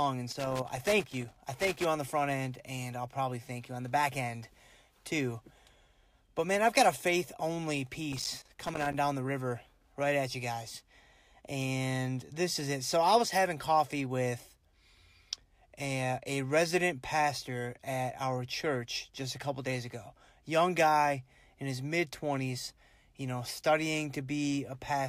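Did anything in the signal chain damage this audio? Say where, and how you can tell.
Yes: loose connector crackle in the analogue wiring, from 0.31 to 1.85 s and again from 8.12 to 8.94 s. A worn contact intermittently breaks the signal, chopping the speech into irregular scratchy bursts. On a waveform these show as ragged dropouts and spikes; on a spectrogram, as scattered broadband vertical streaks.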